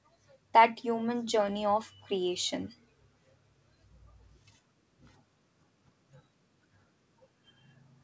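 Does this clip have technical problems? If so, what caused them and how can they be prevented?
No, the speech shows no technical faults; its content stops at 8 kHz, consistent with a normally working wideband call path using a codec such as G.722, so there is nothing to prevent.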